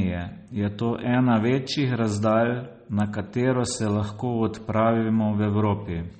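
Across the whole speech clip the sound has a watery, swirling texture, with metallic chirps on the s sounds and smeared attacks, and nothing is present above 8.4 kHz. This is likely MP3 compression at a bitrate low enough to fit about 32 kbps. Starved of bits, the encoder chopped off the treble at that fixed frequency and discarded quieter frequency lines, which flicker in and out from frame to frame and produce the plainly audible swirl.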